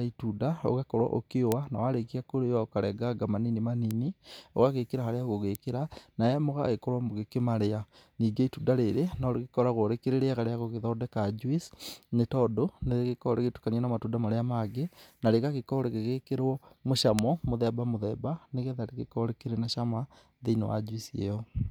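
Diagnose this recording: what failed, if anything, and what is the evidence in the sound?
Bit error spikes in the digital path, in memory or on a link: sharp broadband ticks at 1.52, 3.91 (after "ũkarenganga manini"), 5.55 and 17.19 s, reaching about -6 to -12 dBFS. In each, one to three samples jump by a power of two, unrelated to the speech.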